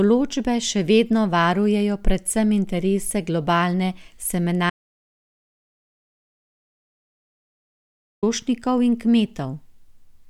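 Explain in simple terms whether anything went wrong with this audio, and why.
Something did go wrong: an audio dropout to silence. From 4.7 s to 8.23 s the speech stops abruptly, mid-flow, and about 3.5 seconds are simply gone before it cuts back in. What sets this apart from a natural pause or a quiet stretch is that the gap is dead silence, with no background hiss or room sound at all. The likely cause is the input briefly dropping out, with the recorder writing nothing but silence meanwhile.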